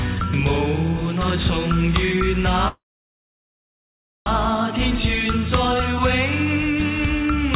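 From 2.68 to 4.28 s, a call audio freeze: sound stops, brief fade then about 1.5 s of silence, likely delayed packets starving the jitter buffer; unlike a dropout, it resumes exactly where it stopped, nothing lost, through the 4 kHz-limited G.711 path.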